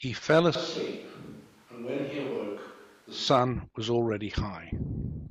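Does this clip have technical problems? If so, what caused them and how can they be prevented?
Yes. From 0.55 s to 3.28 s the speech turns roomy and hollow in one step, loses its low end, drops by around 5 dB, and picks up more background noise, sitting maybe 30 dB below the voice. Then it snaps back just as abruptly. That's a switch to a distant microphone: the close mic's signal most likely dropped out, so the recording fell back to a farther source like a camera mic that hears far more of the room. To prevent it, monitor the close mic live and check its connection and battery before rolling.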